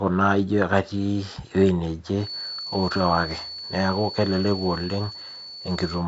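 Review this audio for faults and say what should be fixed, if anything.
From 2.16 s, just after "naijo katii ewei", to the end, a feedback whistle at 4.4 kHz sits well below the speech, likely from a loudspeaker-to-microphone loop held near the feedback point. On a spectrogram it appears as a thin, unbroken horizontal line. To prevent it, lower the monitor gain, move the microphone away from the loudspeaker, or use headphones.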